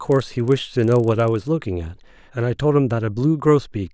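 From 0.0 to 1.48 s the speech carries a resampler restarted on every block: each 40 ms block was converted in isolation, likely from 48 kHz down to 16 kHz, so every block edge picks up a small error, heard as a 25 Hz buzz under the speech.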